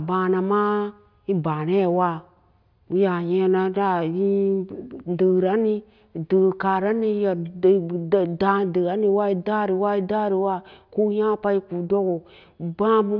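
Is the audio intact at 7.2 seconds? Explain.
Yes, at 7.2 seconds the speech plays through cleanly, with no dropout, click, distortion or other fault at that point.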